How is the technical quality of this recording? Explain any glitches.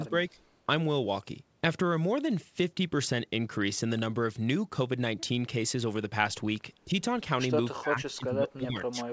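The speech is dipped in level three times, and its band stops at 8 kHz, as expected on a wideband call path. The dips, at 0 to 0.12 s, 6.85 to 6.92 s and 7.79 s to the end, are likely speech suppressed in double talk: an echo canceller mistook overlapping far-end sound for echo and pulled the talker down, slightly at first, then by about 15 and 20 dB. Waveform and spectrogram show sudden thinning, the last sustained.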